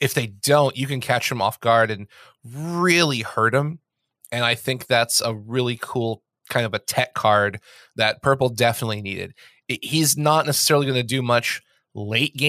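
No technical faults are audible.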